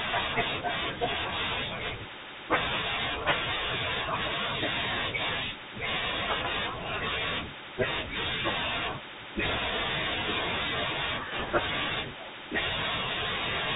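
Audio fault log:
Throughout: Bluetooth CVSD headset codec. Nothing above 4 kHz gets through, s sounds turn scratchy, and a grainy hiss sits underneath, which fits a 64 kbps CVSD link.
9.45–9.58 s and 11.39–11.59 s: bit errors on a Bluetooth voice link. You hear a short rushing crackle rather than sharp clicks, because each flipped bit only nudges the waveform slightly. The second burst has a few percent errors and sounds rougher.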